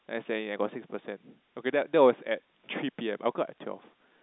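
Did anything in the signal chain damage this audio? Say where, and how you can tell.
No, nothing here sounds damaged; the speech sits in the usual telephone band of roughly 200 Hz to 3.7 kHz that you'd expect from a G.711 A-law phone line, with at most a faint hint of the codec's own grain riding along with it.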